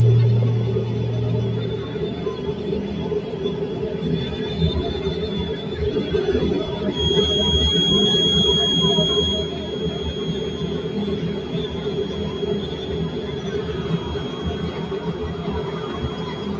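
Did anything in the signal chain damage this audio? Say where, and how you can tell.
Yes. In the call processing, a noise suppressor made for speech stayed active on non-speech material throughout. It mistakes held tones, ambience and reverberant tails for background noise and pulls them down by around 10 dB, while onsets pass largely intact. The result is a pumping, fluttering level: each attack mostly gets through, then the sustain and decay sink away, leaving the sound thin and choppy.

From 6.86 s to the end, a steady tone at 3.3 kHz sits some 15 dB below the main signal, swelling and fading slowly in level. This is a feedback whistle. The likely cause is a loudspeaker-to-microphone loop on the call running at the edge of instability, so one frequency keeps recirculating without building into a howl. It can be heard as a thin, persistent whistle riding inside the call's band, which stops at 8 kHz.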